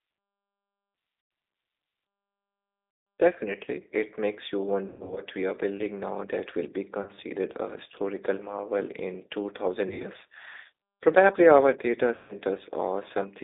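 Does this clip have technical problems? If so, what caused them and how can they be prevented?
Yes. The whole clip went through the G.729 codec (the G.729A variant) at 8 kbit/s, which models each 10 ms frame as a vocal tract filter, a pitch predictor and a few pulses instead of storing the waveform. Its line band runs only from about 250 Hz to 3.7 kHz, so the speech sounds thin and muffled, with a plainly audible rough, synthetic edge. Using a wideband codec such as G.722 or Opus at a higher bitrate would prevent this.

There is also VoIP packet loss concealed by the speech codec. Packets failed to arrive, and the decoder filled each gap by repeating its last pitch and filter settings at a falling gain. The result is speech smeared into a buzzy tone or coloured noise that fades, with weakened, distorted sound lingering after the packets return. The losses fall at 1.21–1.31 s (100 ms), 2.91–3.07 s (160 ms), 4.88–5.22 s (200 ms scattered over 280 ms, longest run 120 ms), 7.02–7.10 s (40 ms), 9.88–10.10 s (100 ms over 160 ms, longest run 60 ms) and 12.15–12.34 s (140 ms). 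A more reliable network path, a larger jitter buffer and forward error correction would prevent these dropouts.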